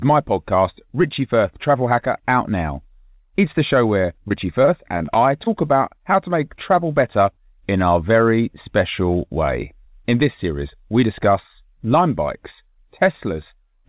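Speech sent over a call path whose sound stops at 4 kHz, which fits G.711 mu-law at 64 kbps. From 4.02 to 5.72 s the stream suffers repeated packet loss (robotic sound): nine short gaps, the longest about 23 ms, each filled by stretching the preceding audio, so the speech turns choppy and robotic with small pieces missing.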